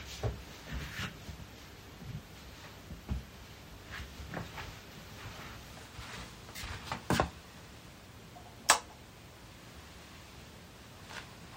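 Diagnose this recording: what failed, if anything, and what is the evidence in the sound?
A section at the wrong speed runs from 5.73 s to the end: the sound abruptly plays 1.12 times faster, with pitch rising about two semitones in step. Speed and pitch shifting together point to playback or editing, likely the section being clocked at the wrong rate.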